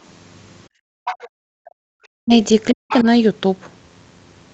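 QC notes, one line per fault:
0.68–1.05 s and 1.29–1.91 s, background gated by the echo canceller: the room tone gets yanked down by about 40 dB for roughly 0.4 s the first time and about three quarters of a second the second time, then snaps back. That's the canceller clamping the mic hard while the far end plays out of the speaker and letting go once it thinks the line is clear, so the ambience just vanishes and reappears.
1.05–1.29 s and 2.88–3.03 s, other side's voice leaking through: a second, quieter voice slips in, sitting around 10 dB under the main talker. It's likely residual echo, meaning the loudspeaker feed got back into the mic and the canceller didn't fully scrub it out. The first bit lands right between the two gated stretches.
2.19–2.33 s and 2.73–2.85 s, speech suppressed in double talk: the main voice drops out in two short chunks of about 150 ms and about 100 ms, and each drop goes very deep. 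Likely both sides were talking at once, the canceller couldn't tell its own talker from the echo, and it pulled everything down, so the near voice gets carved out mid-flow rather than fading.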